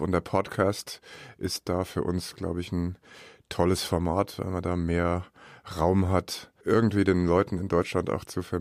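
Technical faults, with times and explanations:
No technical faults were found, so there are no times or explanations to give.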